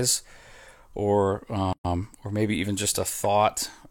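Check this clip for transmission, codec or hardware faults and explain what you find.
Two related playback faults sit back to back near the middle of the speech, just before "or maybe even just".

At 1.73 s there is a playback stall. The speech halts mid-flow and goes silent for 120 ms, until 1.85 s, most likely because the player ran short of buffered data or its thread was held up.

From 1.85 to 2.09 s comes time-compressed catch-up. To work off the backlog the stall created, the player trims and cross-fades tiny slices, running about 1.5 times normal speed. The hurried stretch keeps its natural pitch, which separates it from simple faster playback, where pitch would rise too.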